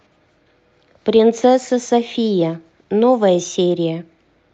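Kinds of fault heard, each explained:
Nothing here counts as a fault; the speech just carries the normal sound of a call codec, with its top end trimmed at around 8 kHz.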